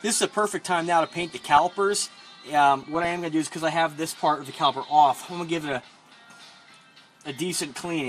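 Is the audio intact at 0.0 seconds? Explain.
No. At 0.0 s the sound already carries MP2 compression damage, and it runs through the whole clip rather than starting at a point. The top end is dull, and a gurgling, granular texture sits on what remains. That is the likely result of MPEG Layer II coding at a low rate, consistent with about 80 kbps: too few bits across its 32 sub-bands, so upper bands drop out and flicker while the surviving bands are coarsely quantised.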